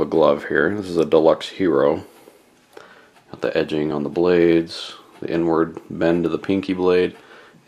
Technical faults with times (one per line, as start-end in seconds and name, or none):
3.91 dropped buffer (overrun)